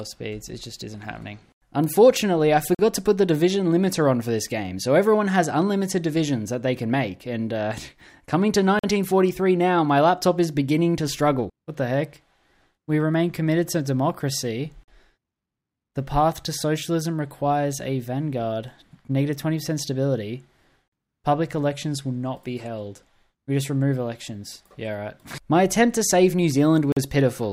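At 2.75, 8.79, 14.84, 20.88 and 26.92 s the audio drops out for 44 ms each time. This is a gap between chunks: the stream arrives in 6-second blocks, and silence sits at every join, though no material is lost on either side. Each one sounds like a brief, hard-edged hole recurring at a steady 6 s rhythm. A waveform shows flat-line slots with abrupt edges, and a spectrogram shows thin, clean vertical blank stripes across all frequencies.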